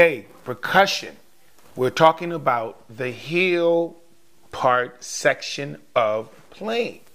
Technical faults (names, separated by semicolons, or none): crude rate conversion